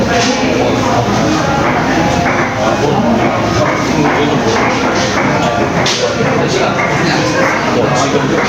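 A sound recording with gain pumping throughout, most likely from input gain set far too high and a fast limiter or compressor clamping down on every loud event. The gain swings by roughly 10 dB, leaving the whole recording squashed.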